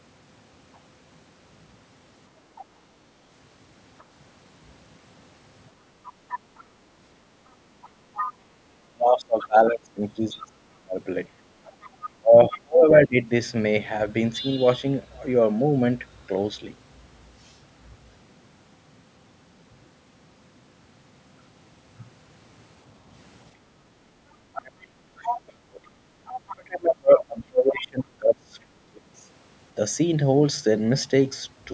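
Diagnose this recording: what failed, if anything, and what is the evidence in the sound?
De-emphasis applied wrongly, at the signal-processing stage: from 0.0 to 14.01 s the treble slopes smoothly down, about 8 dB lower at 10 kHz than at 1 kHz, so the sound is dull. A gradual tilt like this differs from the call path's normal sharp cutoff at 8 kHz.

Other side's voice leaking through, at the call-processing stage: a second voice sits under the talker briefly at 2.56–2.62 s (very faint), then at 6.08–9.47 s and 11.65–12.58 s (around 15 dB down), and at 25.24–26.55 s (around 10 dB down). This is likely residual loudspeaker echo that the echo canceller failed to remove. Unlike crosstalk, it comes and goes with the far end.

Speech suppressed in double talk, in call processing: during 8.84–13.26 s and 24.52–28.82 s the talker's level dips sharply, by roughly 30 and 35 dB at worst, for about two and three seconds in total, while the other voice is present. 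The likely cause is the echo canceller ducking both voices at once. That dependence on the far side talking sets it apart from ordinary packet loss.

Background gated by the echo canceller: room sound drops for a fraction of a second at 11.30–11.54 s (about 16 dB) and at 24.04–24.17 s (about 9 dB), then returns. Only the ambience dips, not the talker, which separates it from the double-talk suppression.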